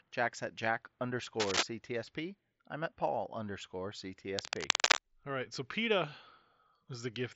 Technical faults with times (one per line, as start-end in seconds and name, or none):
1.40-1.63 cable scratch noise
4.25-5.06 cable scratch noise